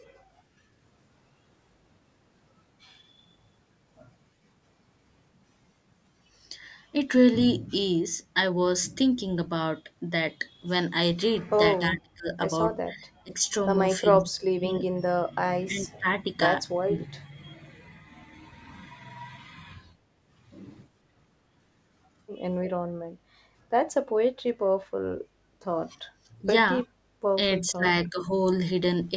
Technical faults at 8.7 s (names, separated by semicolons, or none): none